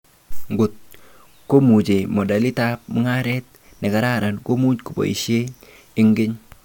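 Listening to this speech recording, nothing technical stood out as wrong at any point.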